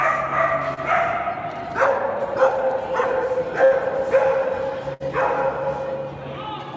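At 0.74 s comes a short concealed packet loss lasting until about 0.80 s. About 30 ms of audio never arrived in time. The receiver patched roughly 29 ms of it by extending the sound just before, then blended back into the real signal. It is heard as a brief smear or wobble, and a short sound there can drop out.

At 3.65 s a burst of packet loss runs to 3.74 s. Around 60 ms went missing. The receiver stretched the preceding sound for about 61 ms and let it fade. The result is a short held buzz or sinking hiss before playback resumes further on. The same fault returns at 4.94 s, ending at 5.03 s, with about 60 ms concealed and 60 ms lost. Both gaps sit on a call path whose band stops at 8 kHz, which points to G.722 at 64 kbps.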